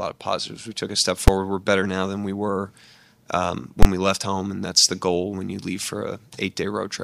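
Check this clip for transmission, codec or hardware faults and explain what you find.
There are two hits of invalid numbers at full scale: a single bang at 1.28 s and a longer one from 3.83 to 3.85 s. In both, a calculation blew up into infinite or invalid values, which got clamped to full scale for a whole processing block. The first lasts about 6 ms, which fits a 256-sample block, and it's just one sharp crack. The second runs about 23 ms, which fits a 1024-sample block, so you get a brutal pop in and out with nothing in between.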